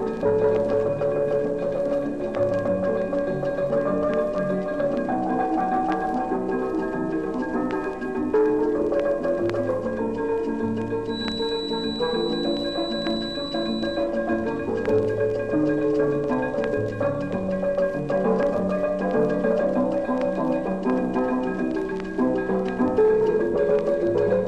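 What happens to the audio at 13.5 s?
At 13.5 s a feedback whistle is sounding, running from 11.05 to 14.11 s: a thin 4 kHz tone sitting roughly 10 dB under the sound, likely from a speaker-to-microphone loop held just at the feedback point. Unlike a fixed electrical tone, it swells and fades slowly in level.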